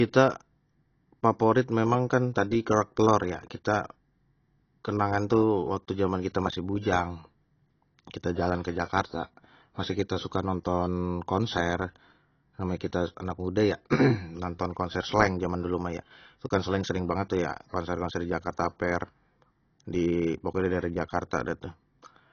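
Throughout, the speech sounds dull and smeared, cut off above 6.6 kHz, with a fizzy warble. This is likely AAC compression at a low bitrate.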